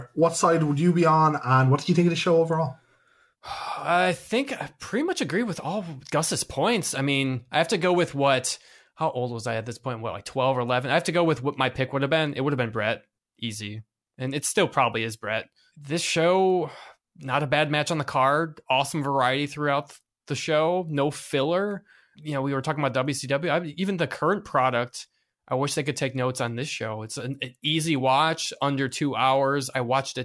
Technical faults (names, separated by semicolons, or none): none